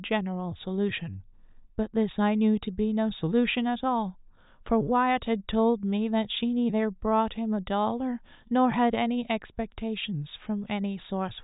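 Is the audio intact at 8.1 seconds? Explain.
Yes, at 8.1 seconds the speech plays through cleanly, with no dropout, click, distortion or other audible fault at that moment.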